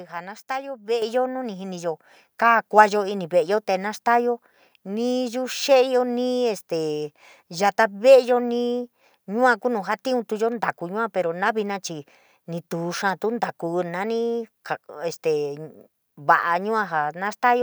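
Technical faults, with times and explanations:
1.02 s, microphone volume stepped up: the level of the speech and the room noise behind it jumps together by about 7 dB in a single instant, with no gradual rise. That shared jump is the giveaway. The call software judged the microphone input too quiet and raised the device's input volume in one step, so everything the microphone picks up arrives louder from that moment on, rather than the speaker simply talking louder.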